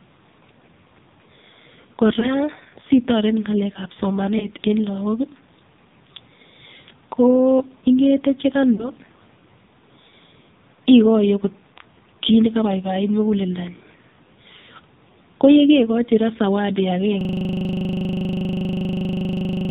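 Heavy AMR narrowband mobile codec damage runs throughout the speech. The voice sounds buzzy and synthetic, and the spectrogram is empty above 4 kHz, which fits a low-rate mode near 6 kbps.

Lost AMR speech frames cause brief warbling dips at 2.2 s and 4.4 s. Longer, drawn-out fades follow at 8.74 to 8.90 s and again at 14.6 s. In each case the decoder reused its last good pitch and vocal tract settings while lowering the gain, so the waveform envelope shrinks at each point, suggesting one and then two lost frames.

From 17.21 s to the end, a system hang loop repeats one 40 ms piece of audio at 25 Hz, producing a rigid buzz. The waveform shows identical cycles, and the spectrogram shows evenly spaced bands.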